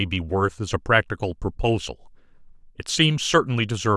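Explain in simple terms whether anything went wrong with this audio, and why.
Nothing went wrong with this speech recording. At no point does anything stand out as a technical problem.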